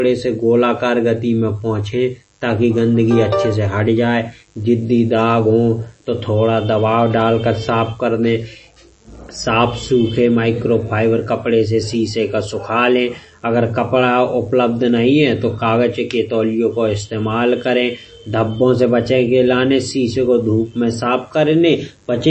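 A speech recording carries a faint, raspy mains buzz throughout, well below the voice, from switching spikes on the 50 Hz mains; a spectrogram shows evenly stacked horizontal lines at 50 Hz multiples up into the kilohertz range. The whole clip also sounds watery and swirly with smeared attacks, likely from heavy MP3 compression fitting a bitrate near 32 kbps; the spectrogram shows a hard ceiling at 8.3 kHz and flickering gaps below it.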